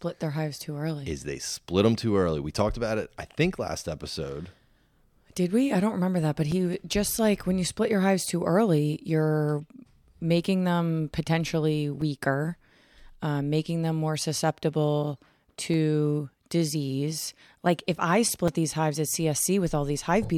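Speech with four blocks of digital silence, at 6.52, 12.01, 15.74 and 18.48 s. Three drop out for about 5 ms and one for about 1 ms. Each cuts abruptly to silence, so they come across as little ticks, pointing to output buffers not filled in time.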